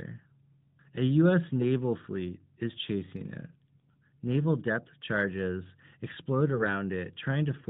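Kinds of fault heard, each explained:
AMR bit errors: Just after "depth charges explode", from about 6.52 to 6.69 s, the speech turns hoarse, scratchy and gargly while its pitch and level roughly hold. A burst of flipped bits, around a few percent, hit the less protected parts of the narrowband mobile codec's frames, a span that fits about eight 20 ms frames. The checksum on the critical bits still passed, so the decoder misplaced its excitation pulses and used slightly wrong pitch, gain and spectral values.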